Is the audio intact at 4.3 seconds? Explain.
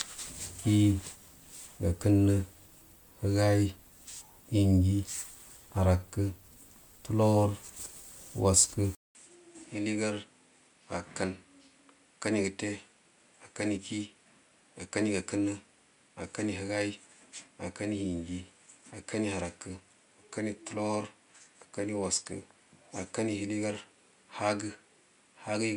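No. At 4.3 seconds, as throughout the speech, the sound is swirly, hollow and smeared with blurred attacks, likely generation loss from roughly three successive MP3 encodes at 128 kbit/s.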